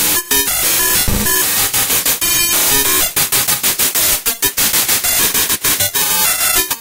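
A recording of sounds with one dropout at 5.54 to 5.63 s, where the last sound is held and fades away before the audio resumes further on. This is a burst of packet loss: the receiver filled a 60 ms gap by extending the previous sound, and 60 ms of the original audio was lost.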